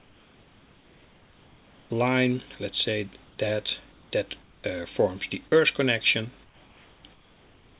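Comfort noise in place of the background fills the opening, 0.0 to 1.9 s, and the short gaps at 3.24 to 3.38 s, 3.92 to 4.12 s and 4.42 to 4.64 s. The sender likely stopped transmitting during these pauses, and the receiver filled them with synthetic noise. The real background, sitting about 31 to 32 dB below the loudest sound, is replaced by a flat, featureless hiss about 2 to 4 dB quieter, which makes each pause sound switched rather than natural.

Sound dropped by the voice detector occurs at 5.48 to 5.52 s. The detector likely judged a quiet stretch to be background and briefly stopped sending, so about 20 ms of the sound is lost and 40 ms is covered by comfort noise. It is heard as a tiny clipped gap, filled with steady hiss, before the sound resumes.

Comfort noise in place of the background returns at 6.44 to 7.04 s and again from 7.14 s to the end. The same swap happens here: the textured background gives way to smooth hiss about 3 to 4 dB lower. 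Under the G.711 mu-law codec the whole clip, including this synthetic noise, has nothing above 4 kHz.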